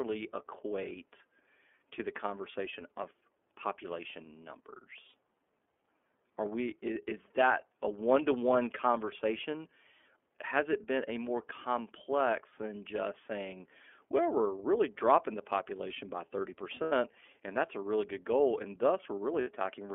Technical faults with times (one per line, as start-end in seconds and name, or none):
0.00-19.94 iLBC codec
5.09-5.13 lost iLBC frames
16.83-16.92 lost iLBC frames
19.41-19.47 lost iLBC frames